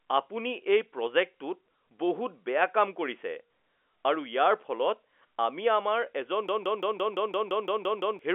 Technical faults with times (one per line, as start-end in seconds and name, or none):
6.49-8.19 system hang loop